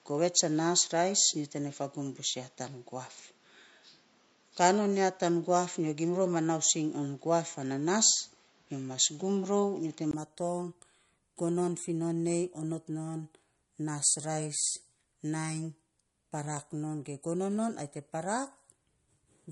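Throughout the speech, the treble stops dead at 11.1 kHz, and the high end has a watery, swirling quality, with sibilants turning metallic and consonant attacks smearing. This is plainly audible codec damage, most likely from MP3 compression at around 47 kbps. At that rate the encoder drops the top band at a fixed frequency and lets weak frequency lines flicker on and off from frame to frame. That flickering sets it apart from simple low-pass filtering, which would sound dull but steady.

From the start until 10.13 s, the sound is narrower still, with nothing above 7.6 kHz. It has a boxier tone, a faint new noise floor about 40 dB below the speech, and a level difference of around 5 dB. At 10.13 s, a 20 ms gap of silence is followed by a sudden return to the fuller band. This points to the input having switched to a poorer device, likely another microphone or a headset call profile, rather than to the codec. 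The MP3 cut-off stays fixed throughout, but this change comes all at once and brings its own noise and level.

From 16.57 s to 18.57 s, about five tiny ticks fall exactly 0.5 s apart. At each one, a fraction of a millisecond of audio is skipped outright, not filled with silence. Their even spacing marks them as periodic USB or driver dropouts, where a background task stalls the audio path at a fixed interval. Random codec glitches or network losses would not keep such a regular beat, and these ticks sound only while the speech is running.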